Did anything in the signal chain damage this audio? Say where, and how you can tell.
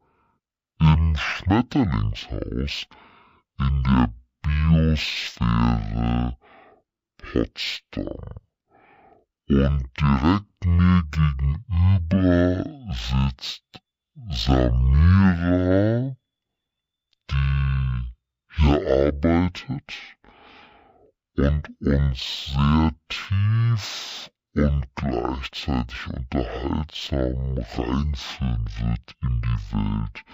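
Yes, there's a stereo read as mono fault at the file-reading or sample-format stage, and it runs the whole clip. The interleaved left and right samples are being read back to back as one channel, so everything plays at half speed, an octave low, with a faint mirrored copy in the top half of the spectrum.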